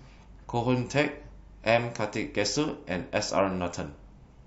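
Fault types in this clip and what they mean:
Nothing to flag here; the speech comes across without any glitch, dropout or distortion worth mentioning.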